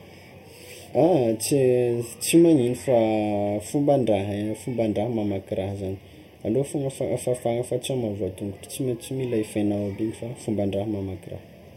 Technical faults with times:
0.00-11.77 channel delay (comb filtering)

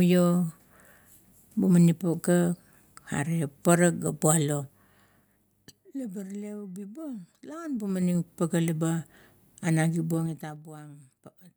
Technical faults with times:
4.58-6.00 zipper noise
7.46-8.39 zipper noise
10.11-10.67 zipper noise

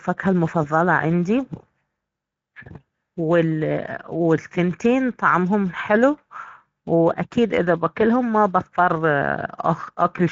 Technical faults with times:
0.00-10.31 Speex codec

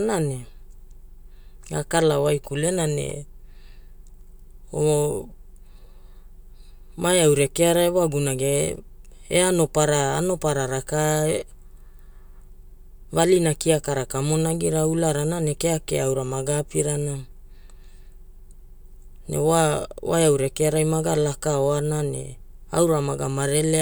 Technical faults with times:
none

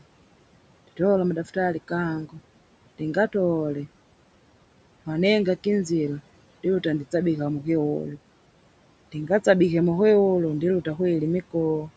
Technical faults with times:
0.00-11.96 noise suppressor artifacts

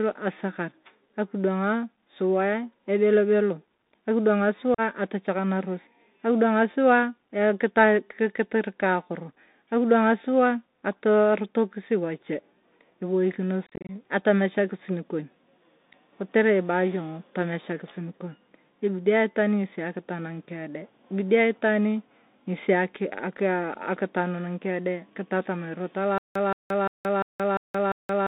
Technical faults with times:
0.00-28.29 Bluetooth CVSD headset codec
4.74-4.80 unconcealed Bluetooth headset packet loss
13.66-13.91 unconcealed Bluetooth headset packet loss
26.18-28.29 stutter with silent gaps

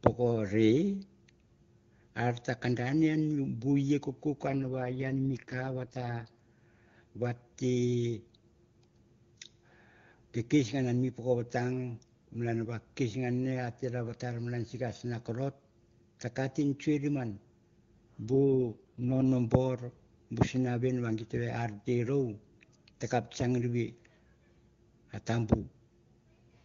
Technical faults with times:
4.48-6.36 AMR rate drop
18.26-19.24 AMR rate drop

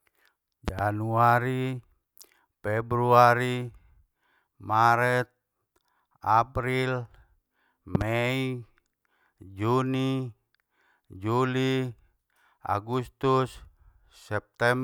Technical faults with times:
0.68-0.81 loud pop
7.95-8.04 loud pop

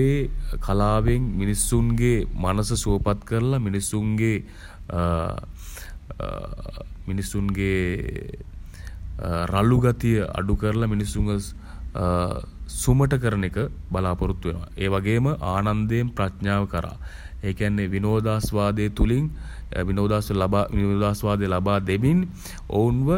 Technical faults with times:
none

